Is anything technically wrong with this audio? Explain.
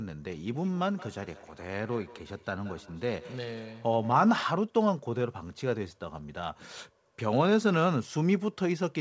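Yes. From 0.52 to 4.7 s, each word returns roughly every fifth of a second, thin and ringing, at about 19 dB below the speech: feedback echo between two devices, where a second device replays this microphone's audio back into it.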